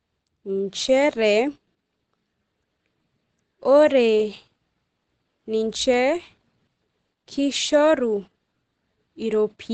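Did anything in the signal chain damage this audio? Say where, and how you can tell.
Yes, at the codec stage, throughout the clip: the speech sounds muffled and hoarse, with nothing above about 9 kHz. That points to Opus compression, likely in its SILK speech mode at a low rate near 16 kbps, where the encoder trims bandwidth and detail.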